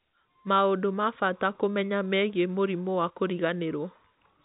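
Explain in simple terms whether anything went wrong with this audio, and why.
Nothing went wrong: the speech comes over G.711 telephone coding with nothing above about 3.8 kHz, the ordinary, slightly narrow sound of a landline call rather than a fault.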